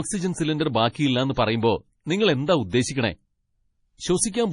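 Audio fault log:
throughout, MP3 compression: the speech sounds heavily watery and swirly, with nothing above 10.6 kHz. This is likely MP3 coding at a bitrate the sound suggests is near 32 kbps, cutting the treble and dropping weak frequency lines that flicker between frames.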